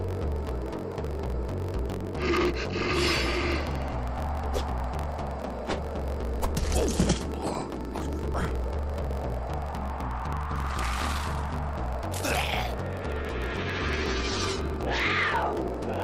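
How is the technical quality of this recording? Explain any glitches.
The recording has two clear technical problems, one running through the whole clip and one brief jump near the start.

Throughout, a steady low buzz sits under the audio at about 46.9 Hz, and everything plays about 1.12 times too fast while keeping close to its normal pitch. This is a block size mismatch (truncated). One stage hands over blocks longer than the next stage reads, which fits reads of 1024 samples. The tail of every block is discarded. Those regular cuts create the buzz at the block rate and shorten the audio, so it runs fast.

At about 1.77 s the playback skips ahead. Around 0.4 s of audio vanishes, and the material on either side is butted together with no gap or fill. The audio after the jump was already waiting, so the stream was pulled forward by roughly that amount, and the missing stretch never plays.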